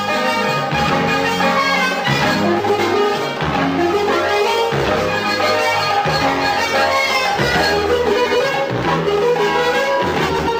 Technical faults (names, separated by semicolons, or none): frames out of order